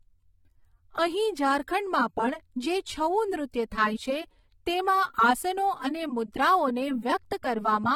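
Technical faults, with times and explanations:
Throughout, AAC compression: the speech sounds dull and smeared, with a fizzy, warbling texture on sustained sounds and sibilants, and nothing is present above 17.4 kHz. This is likely lossy AAC-LC coding at a low rate, consistent with roughly 32 kbps. The encoder quantises each block of frequency lines coarsely against a hearing model, leaving gaps and noise-like fill in the spectrum that shift from frame to frame, while the top band is discarded entirely.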